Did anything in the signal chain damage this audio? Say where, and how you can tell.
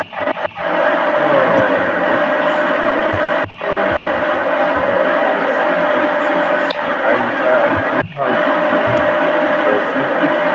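Yes. Throughout the clip a second copy of the voice trails the original by about 250 ms, at roughly the same loudness. This is an echo leak at the far end's call processing: the far end is likely on a loudspeaker, and its echo canceller failed to remove what its microphone picked back up.

Between 2.83 and 4.08 s the speech drags and stutters in ten small hitches, the longest about 100 ms, with roughly 290 ms of held-over sound and nothing lost. These are repeated stalls (stutter) in the network and jitter-buffer stage: late packets kept emptying the buffer, and the receiver stretched the last sound to cover each wait.

From 8.04 to 8.18 s the voice briefly ducks, dropping by about 20 dB for around 150 ms. This is speech suppressed in double talk, in the call's echo processing. It likely happened because both sides spoke at once, and the canceller turned down the local talker along with the echo it was trying to remove.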